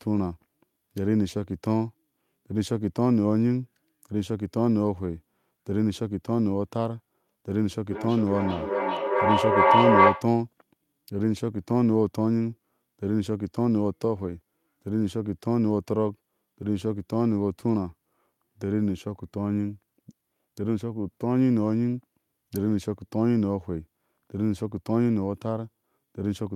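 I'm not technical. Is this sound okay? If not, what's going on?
No. From 7.91 to 10.37 seconds there's feedback echo between two devices. The speech returns roughly every 0.4 seconds, thinner and more ringing each time, and piles up louder than the original. Room reverb would fade, and wouldn't come back as distinct, evenly spaced repeats.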